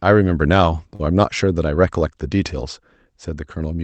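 At 0.95 to 1.01 s the speech hangs on one sound a little too long, with a faint buzz or dip, then carries on with nothing skipped. It is a short stall from a late packet: the jitter buffer ran dry, so the receiver stretched about 39 ms of audio until the packet arrived, leaving everything after it 39 ms later.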